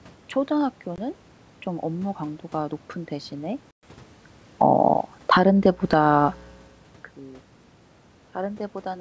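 Packet loss on an ADPCM call at 0.96–0.99 s and 3.71–3.86 s cuts hard silent holes of about 20 ms and 120 ms, which fits a couple of lost packets and then around ten. After each hole the decoder's predictor and step size no longer match the sender's, so the sound comes back slightly distorted before settling. Automatic gain falling from 4.46 to 5.89 s pulls the level down by about 10 dB, so the sound and its background sink together.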